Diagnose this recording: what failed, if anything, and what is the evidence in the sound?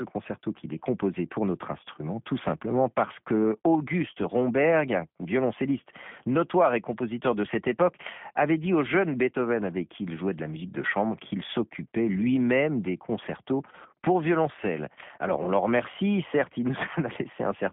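G.729 codec damage across the whole recording, at the codec stage. Nothing above about 3.7 kHz survives, and the remaining band sits between roughly 150 Hz and 3.5 kHz, giving the narrow telephone-line sound. The speech has a plainly audible rough, synthetic edge, which fits an 8 kbit/s G.729A coder. It discards the original waveform and rebuilds each 10 ms frame from a vocal-tract filter, a pitch predictor and a few sparse pulses.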